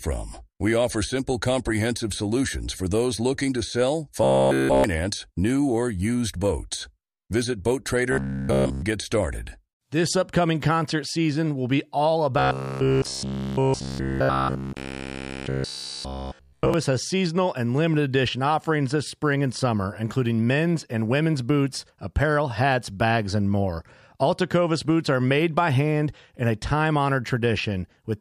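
Robotic sound from repeated short buffers affects this speech recording at 4.24–4.84 s (between "those looking to sell" and "new or used boats"), at 8.12–8.82 s (just before "get started") and at 12.39–16.74 s (from "season will be all" to "has seasonal and limited"). Each stretch turns into a rigid, metallic 66.7 Hz buzz made up almost entirely of repeats. The likely cause is audio arriving too seldom, so playback loops about 15 ms of sound while the real signal is skipped.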